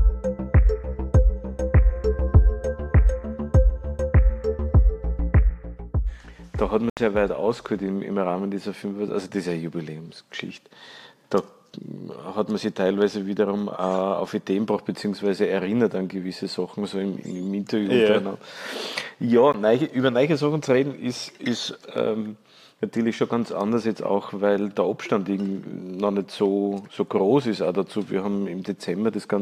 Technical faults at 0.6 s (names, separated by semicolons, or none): none